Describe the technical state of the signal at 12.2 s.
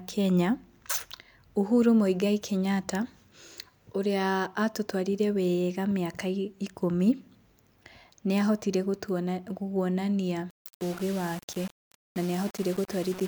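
At 12.2 s the speech sounds grainy and rough, with a gritty distortion that tracks the signal and is strongest in quieter passages, sitting roughly 20 dB below the signal from 10.50 s to the end. The likely cause is low bit depth without dither, consistent with rounding to about 5 bits.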